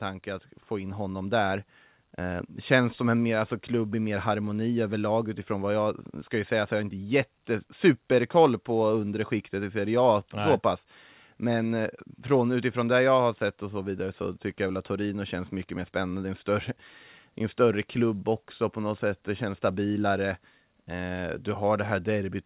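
From 0.24 to 2.57 s the speech and the room noise behind it swell together by about 6 dB, levelling off just before "känns som en mer". This is automatic gain rising: the gain control judged the incoming level too low and ramped its gain up over roughly two seconds. Because it scales everything, the background lifts in step with the voice rather than the voice alone getting louder. The call path's band limit is audible throughout, with nothing above 4 kHz, which fits a G.711 telephone codec.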